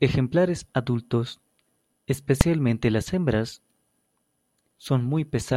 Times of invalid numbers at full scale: 2.41

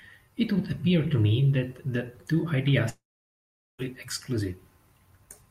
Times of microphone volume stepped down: none

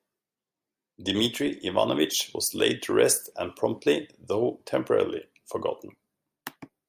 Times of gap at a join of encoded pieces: none

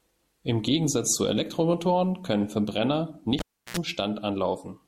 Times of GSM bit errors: none

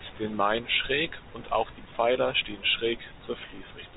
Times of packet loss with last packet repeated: 3.56-3.58

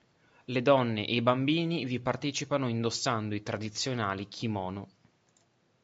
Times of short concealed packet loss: none

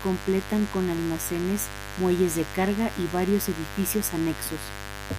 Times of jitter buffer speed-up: none

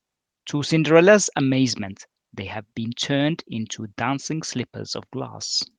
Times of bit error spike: none

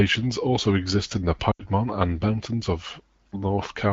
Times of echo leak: none

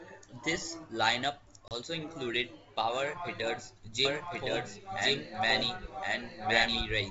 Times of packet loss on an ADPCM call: 1.68-1.72

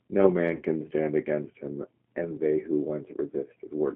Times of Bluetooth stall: none

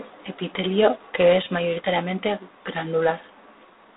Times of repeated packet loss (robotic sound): none

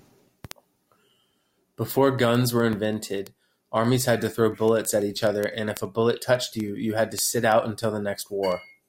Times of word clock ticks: 0.18-8.85

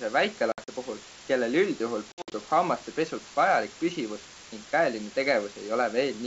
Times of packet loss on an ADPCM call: 0.52-0.69, 2.12-2.33

